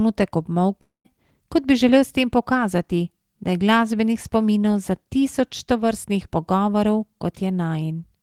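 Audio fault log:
0.81–1.07 s, long network dropout: the speech gives way to a buzzy continuation of the last sound that fades out, followed by about 130 ms of silence before speech resumes, with about 240 ms of the original audio never played. This is likely a stall in incoming packets, with the receiver concealing the gap for about 230 ms. The fading synthetic tail and silent stretch separate it from a brief packet-loss click or a clean edit cut.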